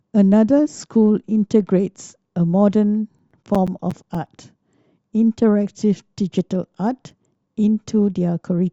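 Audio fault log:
2.83–4.39 s: CD scratch ticks. Fourteen evenly spaced ticks, about nine a second, the longest around 10 ms. A scratch beyond error correction returns once per disc turn.
6.39–7.94 s: CD scratch ticks again. Fourteen shorter ticks at the same rate, none over about 5 ms, where the player patches or mutes the damaged samples.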